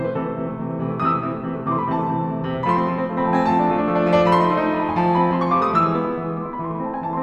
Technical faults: none

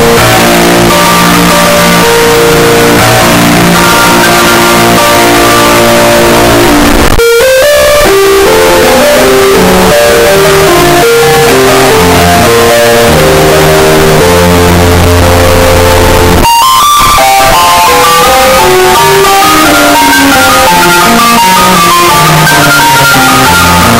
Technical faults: signed and unsigned mixed up

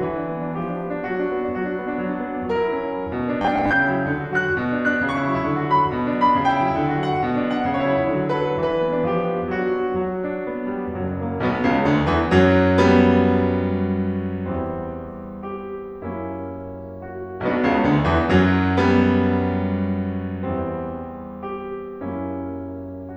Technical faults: robotic sound from repeated short buffers

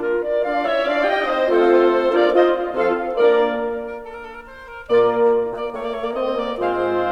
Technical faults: none

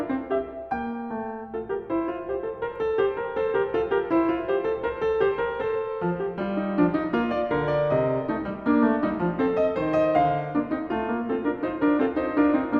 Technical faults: none

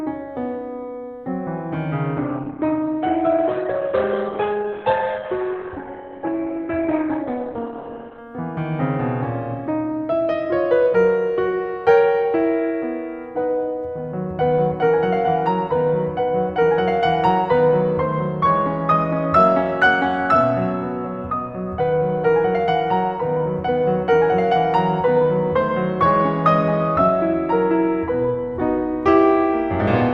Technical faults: adaptive stream at a lower bitrate

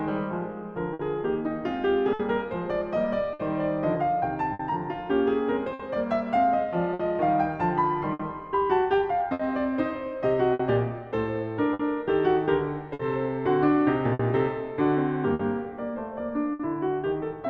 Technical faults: clock drift between sender and receiver; scattered short gaps

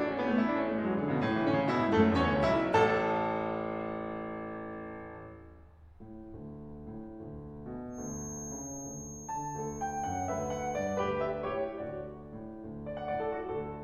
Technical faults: feedback whistle

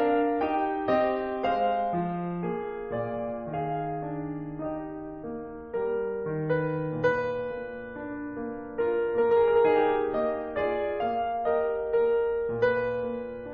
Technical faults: none

